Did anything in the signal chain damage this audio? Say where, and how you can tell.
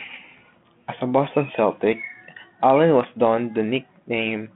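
No, nothing damaged it.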